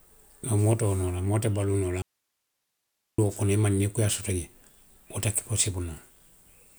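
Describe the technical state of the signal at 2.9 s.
At 2.9 s the signal sits inside an audio dropout to a faint residue, running from 2.02 s to 3.18 s, about 1.16 s in all, between "te baluu noo la" and "kono i maŋ nii". The speech vanishes abruptly and comes back just as suddenly, leaving only hiss far below the programme level, around 55 dB down. That residue points to a likely interruption of the wanted signal while the path after the break stayed live, passing its own noise floor.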